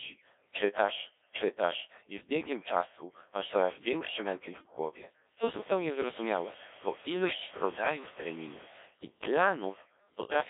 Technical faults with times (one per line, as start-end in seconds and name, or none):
0.00-10.50 Codec 2 vocoder
5.40-8.80 low bit depth with dither